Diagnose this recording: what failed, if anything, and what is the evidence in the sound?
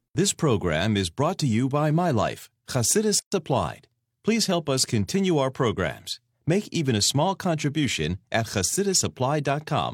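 A gap at a join of encoded pieces opens at 3.19 s and lasts until 3.32 s, an opening of about 130 ms cut into continuous speech. The edges are smeared by the codec, and the speech resumes exactly where it stopped. This is a codec-stage fault: separately encoded segments were concatenated untrimmed, leaving each run's start-up delay and final-frame padding in place.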